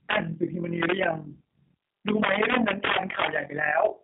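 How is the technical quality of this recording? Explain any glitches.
Pretty rough, honestly. Two problems run through the whole four seconds, and they stack on top of each other.

The first is overlap-add ripple, present from start to finish. Somewhere the audio was chopped into overlapping windowed frames and stitched back together, but the window overlap doesn't add up to a flat gain. So the level dips and recovers once per frame, around 40 times a second, with a swing of about 11 dB. That's deep enough that you hear it as a rough tremolo riding on the speech rather than a subtle flutter.

The second is G.729 codec damage, also throughout and plainly audible. The speech sits in a narrow telephone band from roughly 200 Hz to 3.6 kHz, with nothing at all above 3.7 kHz, which fits a G.729A stream at 8 kbit/s. That codec doesn't keep the waveform. It resynthesises speech from a vocal tract filter, a pitch predictor and a handful of pulses per short frame. 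Here that gives the dull, boxy top end and the slightly grainy, synthetic edge on the speech.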